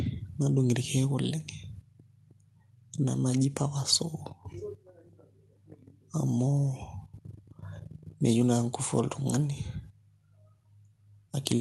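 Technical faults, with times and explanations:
No technical faults can be heard in this speech, so there are no times or explanations to give.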